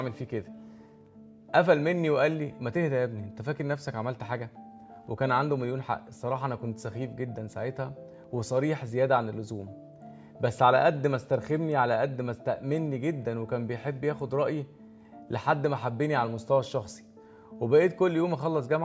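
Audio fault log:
No faults found; nothing to log.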